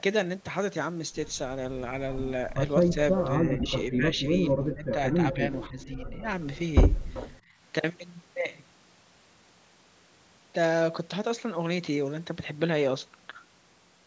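From 2.9 to 2.97 s the speech dips by a few decibels, a brief speech suppression in double talk. The likely cause is an echo canceller that could not separate the near talker from loudspeaker echo while both sides spoke, so it turned everything down. The dip affects the voice itself rather than adding anything, which separates it from an echo leak.

From 3.16 to 3.72 s an echo leak appears: a copy of the voice arrives 386 ms late at about 5 dB below the direct speech. It most likely comes from residual loudspeaker pickup that the far end's canceller failed to remove. The fixed lag and the doubled quality mark it as echo, not reverberation.

Overlapping this, from 3.4 to 6.27 s, a longer speech suppression in double talk pulls the voice down by roughly 15 dB at its deepest, for about two seconds in total. The voice dips.

The same 386 ms echo leak returns faintly at 5.61–5.83 s, about 20 dB down, and again at 7.14–7.32 s, about 15 dB down.

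At 7.42–7.57 s the background is gated by the echo canceller. The room sound drops by about 12 dB for roughly 150 ms while the loudspeaker plays, then comes back.

The call's microphone processing band-limits the audio to 8 kHz, which is not a fault.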